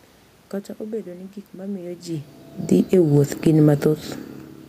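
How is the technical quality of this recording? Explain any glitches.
The recording has one glitch, an automatic gain fall. From 2.67 to 3.71 s the automatic gain control judged the input too loud or its background noise too strong and pulled its gain down gradually by about 4 dB. The speech and the room noise behind it sink together over that second. The level shifts heard around 2 s and 4 s are different: they come from the talker moving relative to the microphone.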